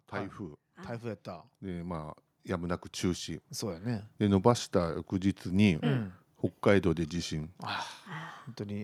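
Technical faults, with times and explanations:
0.11 to 5.4 s, automatic gain rising: the level creeps up steadily over about five seconds, ending roughly 14 dB louder than where it started. The automatic gain control decided the input was too quiet and kept nudging its gain upward, and since it can't tell speech from room noise, the background swells right along with the voice, so the noise floor climbs along with the talker.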